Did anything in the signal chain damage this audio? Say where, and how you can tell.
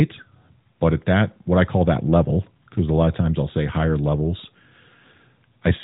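No, nothing in the chain has damaged this speech. It has the band-limited sound of the AMR narrowband mobile codec working as intended, with nothing above about 3.8 kHz and only the light coding texture that fits its 12.2 kbps mode.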